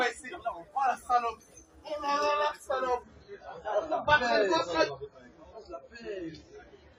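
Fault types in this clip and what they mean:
Adaptive stream at a lower bitrate: the player switched to a much thinner stream from 3.03 s to the end, which fits a drop from about 96 to 16 kbit/s, so the sound changes suddenly without a gap, loses everything above 7.6 kHz and gains audible codec artefacts.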